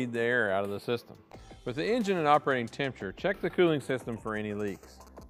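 From the start, the two channels are drifting apart: they come from devices running on separate clocks, off from each other by something like 50 parts per million, so the delay between them keeps creeping, reaching only a small fraction of a millisecond by the end. Fold the sound to mono and the comb notches that delay creates slide slowly through the spectrum, giving a slow, drifting flanging that never quite settles.

Then from 3.80 s to 5.23 s you get GSM signalling bursts. A nearby 2G phone is sending short clusters of radio bursts, the sort it fires off while handshaking with the network, and the audio circuitry rectifies them into sound. It comes through as that galloping dit-dit-dit of brief buzzes at 216.7 Hz, sitting roughly 20 dB under the wanted signal.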